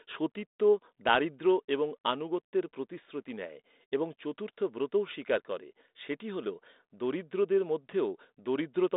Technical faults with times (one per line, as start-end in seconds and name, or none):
1.79-2.97 channel delay (comb filtering)